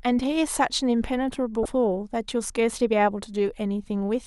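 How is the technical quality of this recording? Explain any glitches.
One glitch stands out, from about 1.62 to 1.66 s: damaged data in a compressed stream. Corrupted bytes make the decoder misread frames and lose sync, leaving a brief disruption in the speech.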